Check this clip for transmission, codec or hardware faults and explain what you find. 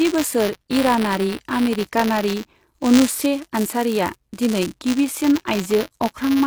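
Two faults run through the whole recording.

From start to finish, the sibilants and upper treble sound gritty and metallic, with s sounds smeared and lisping. This is likely HE-AAC compression, at a bitrate that sounds very low, in the region of 20 kbps. The codec keeps only the lower spectrum properly and fakes the top by copying lower bands upward under a coarse envelope, so the rebuilt treble doesn't match the real harmonics and the damage is plainly audible.

A steady robotic buzz at 188 Hz also sits on the speech and stops during silences. That is buffer tearing. The software filling the playback ring buffer and the hardware draining it have drifted until they cross inside every period, which fits a 256-sample buffer. A small slice of each period, a couple of percent, plays audio from roughly 20 ms earlier, with hard joins on both sides. Those joins repeat at the buffer rate and produce the rattle.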